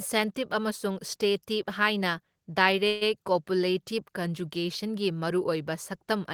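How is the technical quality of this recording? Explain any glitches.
One glitch stands out, a call audio freeze of about 0.16 s. From 2.87 s to 3.03 s the sound stalls: the last fragment before it is stretched into a fading buzz for about 138 ms, with no true silence, and then the speech carries on exactly where it stopped. The likely cause is delayed packets draining the jitter buffer, so the receiver kept extending the last sound until data arrived. Unlike packet loss, nothing is skipped; instead everything afterwards runs about 138 ms late.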